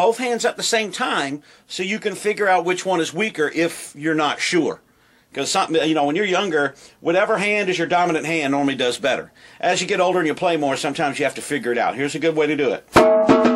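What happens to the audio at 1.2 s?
Nothing goes wrong at 1.2 s: the audio plays through that moment intact, with no audible fault.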